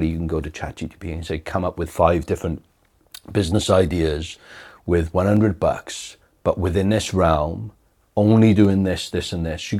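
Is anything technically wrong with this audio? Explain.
Yes. From 0.12 s to 9.31 s the speech has clock drift buffer slips. Two clocks, likely a few hundred ppm apart, let the buffer creep until a handful of samples is dropped or repeated. This leaves a click every 0.66 s, about fifteen in all.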